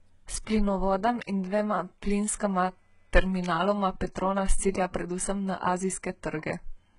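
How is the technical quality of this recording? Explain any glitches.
Heavily degraded by compression throughout. The speech shows HE-AAC compression damage, likely from a very low bitrate around 12 kbps. The treble above the coded band is synthesized by spectral band replication, so sibilants sound gritty and metallic up to an 11 kHz ceiling. A plain low-pass would sound dull, not bright but wrong.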